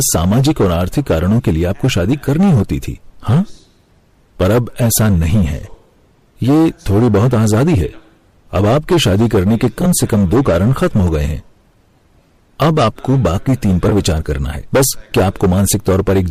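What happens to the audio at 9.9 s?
Around 9.81 to 9.87 s there are frames out of order: two neighbouring blocks, each one frame of about 20 ms, play swapped. The result is a brief garbled flutter. Unlike a dropout or repeat, nothing goes missing and no time is lost.

Hard clipping also runs through this moment, as it does through the whole speech clip. Driven about 14 dB past the limit, roughly a tenth of the samples are cut flat. That gives a harsh fuzz on every loud sound rather than the gentler thickening of soft saturation.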